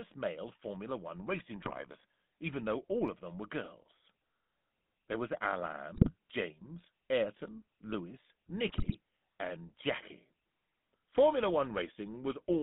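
Speech heard through the GSM full-rate codec, which rebuilds the voice from a vocal-tract model driven by a sparse, regularly spaced pulse excitation and discards much of the fine detail in that excitation. The result is the familiar buzzy, gravelly roughness across the whole clip, clearly audible rather than subtle. The line is band-limited to roughly 150 Hz to 3.6 kHz, which thins the low end and dulls the top, and the coarseness fits a 13 kbit/s stream. On top of this come three bursts of GSM bit errors, where corrupted bits reach the decoder and scramble its filter, pitch and gain parameters for several consecutive frames. The voice briefly breaks into squawks, pops and gargling from 1.61 to 1.72 s, again from 5.94 to 6.14 s, and most heavily from 8.68 to 8.96 s. The longer and denser last burst points to a higher error rate on the link at that moment.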